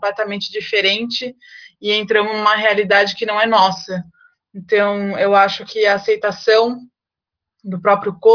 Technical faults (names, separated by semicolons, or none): none